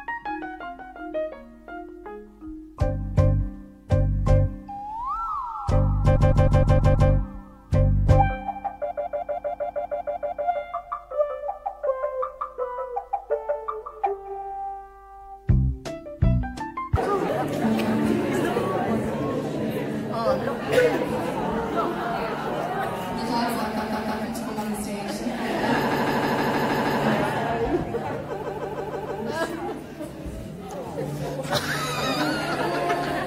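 A stuttering loop of the same short block, roughly 157 ms long, plays 6 extra times at 6.15–7.09 s, 10 at 8.90–10.46 s, 3 at 23.76–24.23 s, 7 at 25.90–27.00 s and 5 at 28.41–29.19 s. These are repeated frames: a run of compressed frames, which fits about six frames, was written or sent again, so the decoder replays it and each event lengthens the audio.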